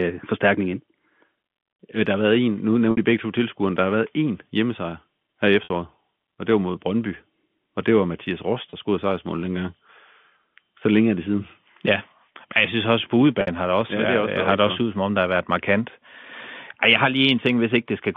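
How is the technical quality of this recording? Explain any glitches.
Four brief glitches break up this telephone-band speech, which G.711 coding confines to roughly 150 Hz to 3.5 kHz. At 2.91, 5.64, 8.7 and 13.41 s there is packet loss with pitch repetition. Gaps of 60 ms (30 ms at 8.7 s, which fits 30 ms packets) are bridged by looping the last pitch period. The 30 ms one sounds like a short, slightly held, buzzy note, while the 60 ms ones fade into silence before the speech returns with a short cross-fade.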